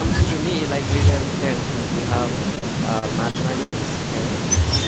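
Repeated stalls (stutter) run from 2.55 to 3.75 s: packets arrived late, so the jitter buffer emptied five times. Each gap, the longest 99 ms, was bridged by extending the previous sound. About a fifth of that stretch is filled, so the speech drags and stutters without losing anything.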